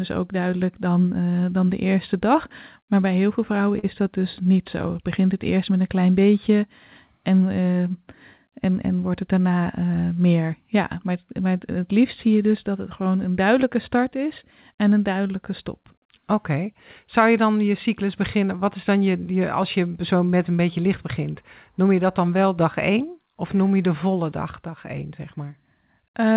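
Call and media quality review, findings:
Short concealed packet loss, 1.10–1.13 s, between "ook duidelijk" and "dan de eerste dag": brief smear. Jitter buffer/decoder concealment extended the preceding sound across a gap of about 20 ms, then cross-faded back into the received audio.

Short concealed packet loss, 3.79–3.85 s, between "bij heel veel vrouwen" and "dat dus niet zo": longer wobble. Roughly 40 ms missing, nearly all filled by synthesized continuation. Band edge at 4 kHz fits a narrowband G.711 call path.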